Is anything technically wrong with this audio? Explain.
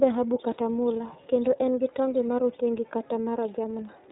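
Yes. The speech has passed through the iLBC codec, and the damage is plainly audible from start to finish. This narrowband VoIP codec codes each frame's excitation on its own. Here the frames are 30 ms long, and the sound fits a rate near 13.33 kbps. Nothing above 3.8 kHz survives, so the speech sounds muffled and telephone-like. The coding also leaves it slightly rough and synthetic.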